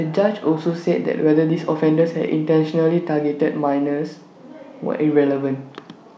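Nothing in the speech stood out as a technical fault on listening.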